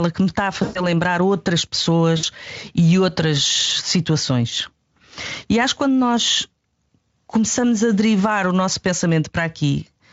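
At 0.63 s, after "que me está a", VoIP packet loss concealed by the speech codec stretches the sound into a fading buzzy tone or coloured noise for about 120 ms. At 2.17 s, before "e outras situações", a 60 ms gap is similarly smeared.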